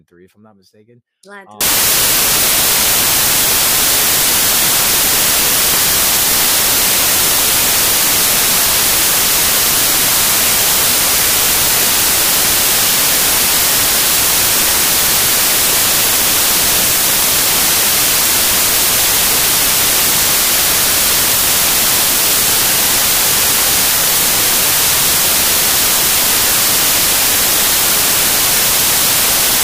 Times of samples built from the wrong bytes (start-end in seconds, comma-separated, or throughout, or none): 1.61-29.64